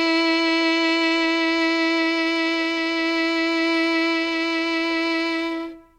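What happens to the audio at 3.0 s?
Nothing goes wrong at 3.0 s; the music plays through that moment intact, with no dropout, click or distortion.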